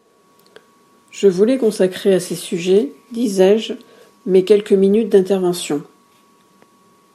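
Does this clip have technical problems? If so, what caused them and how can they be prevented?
No, there are no technical problems to report here.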